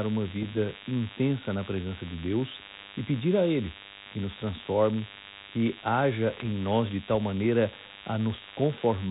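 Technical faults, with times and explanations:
Throughout: DECT cordless phone buzz. A thin, steady buzz sits under the speech at about 15 dB below it, pulsing at 100 Hz with a dense stack of harmonics. A nearby DECT handset or base transmits a short radio burst every 10 ms, and the audio circuitry rectifies those bursts into sound. Unlike 50 or 60 Hz mains hum, which is smooth and low, this is edgy and buzzy, and its fundamental sits exactly at 100 Hz.
0.42–0.51 s and 6.33–6.44 s: bit errors on an ADPCM link. Each stretch, roughly a tenth of a second long, brings pops and a rough, crackly burst with brief jumps in level. The length points to a handful of frames being hit, at an error rate of a few tenths of a percent. On the 32 kbit/s G.726 ADPCM link, a flipped bit misleads the decoder's step size and predictor, so the damage rings on for several milliseconds. Codec hiss would track the speech level steadily. 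These disturbances instead arrive as isolated, jagged bursts.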